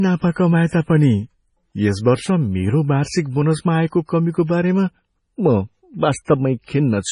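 Throughout the speech, heavy damage that points to MP3 compression at a low bitrate, likely around 24 kbps: nothing remains above 10.5 kHz, and s sounds turn watery and chirpy. A spectrogram shows a hard ceiling there, with speckled, flickering gaps beneath it.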